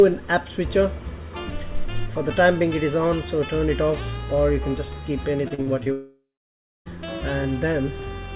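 Band-limited audio with nothing above 4 kHz, consistent with a G.711 mu-law call path at 64 kbps, is broken up by repeated packet loss (robotic sound) from 5.48 to 5.88 s: about four short holes, none longer than 40 ms, are patched by repeating prior sound, giving a choppy texture. From 5.92 to 6.88 s the audio cuts out for nearly a second, a buzzy continuation fading into about 0.63 s of silence, most likely a long network dropout.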